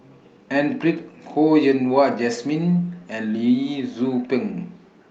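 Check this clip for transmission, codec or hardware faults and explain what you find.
No transmission, codec or hardware faults can be heard anywhere in the speech.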